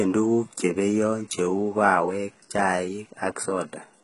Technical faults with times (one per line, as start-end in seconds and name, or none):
0.00-4.04 HE-AAC compression